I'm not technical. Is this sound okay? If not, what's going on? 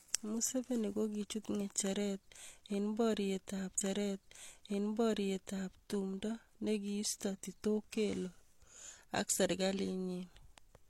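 No. The player fetched the same chunk of the stream twice, a stream segment repeated, so about 2 seconds of speech play again. Between 3.77 and 5.76 s the audio jumps back with a small blip and replays before "tumndo nikiisto".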